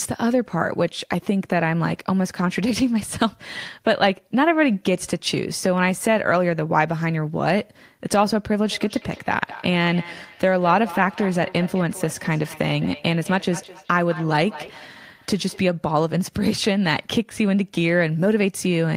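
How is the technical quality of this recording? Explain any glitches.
The recording has one clear fault, feedback echo between two devices, from 8.63 to 15.69 s. Two devices on the same call share a room, so one device's microphone re-captures the other's playback, which its echo canceller cannot remove. The speech returns roughly every 200 ms, peaking about 16 dB below the direct speech.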